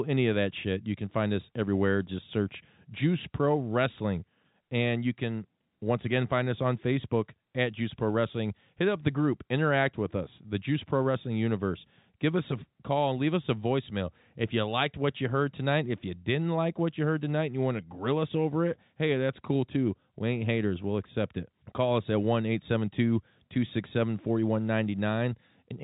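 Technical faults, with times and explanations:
Nothing stood out on listening to this speech, which comes through G.711 telephone coding with nothing above about 3.8 kHz.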